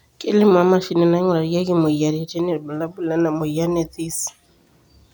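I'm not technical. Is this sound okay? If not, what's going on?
Yes, there's nothing wrong with this recording.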